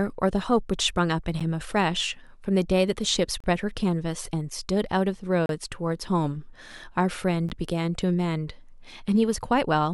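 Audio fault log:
1.40 s, 3.40 to 3.44 s, 5.46 to 5.49 s and 7.49 s: gap between stream segments. The speech drops into hard-edged silence of about 11 to 35 ms, recurring every 2 s at segment joins, where the timestamps don't quite meet and the player pads the hole. Nothing is actually missing.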